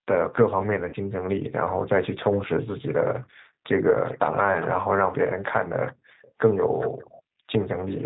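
A speech clip carried over a G.729 codec at 8 kbit/s throughout. The spectrogram shows a hard ceiling at 4 kHz, and the voice sounds plainly rough and synthetic, because the decoder rebuilds each 10 ms frame from a vocal-tract filter, a pitch predictor and a few pulses rather than the actual waveform. From 0.89 to 0.96 s there is VoIP packet loss concealed by the speech codec. About 40 ms of audio went missing, which fits two lost 20 ms packets. The decoder repeated its last pitch and filter at falling gain, so the sound smears into a fading buzzy tone or coloured noise. On a spectrogram this appears as flat, repeated bands instead of moving formants, and on the waveform as a decaying, overly regular stretch. From 7.22 to 7.51 s the background is gated by the echo canceller. While far-end audio played, it pulled the microphone down by about 36 dB for roughly a third of a second. This shows as a near-silent gap in the room noise on the waveform and a dark vertical band on the spectrogram.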